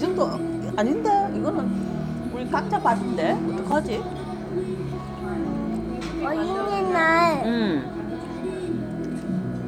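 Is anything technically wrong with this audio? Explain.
Yes. A block of digital silence at 3.72 s: for about 5.8 ms the signal drops straight to zero and then resumes, with no fade on either side. A span that short, which fits a 256-sample buffer, points to the playback or processing code failing to fill one output buffer in time and leaving it empty. The abrupt jump to zero and back produces an edge at each end, heard as a single sharp tick or small pop.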